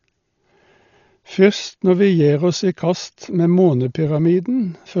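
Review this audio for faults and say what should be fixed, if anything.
Dull, band-limited speech with nothing above 6.9 kHz, plus rough fluttering noise around tones throughout, likely heavy Dolby Digital compression near 40 kbps, which narrows the band, gives many lines no mantissa bits and fills them with dither noise. Encode at a higher AC-3 bitrate to prevent this.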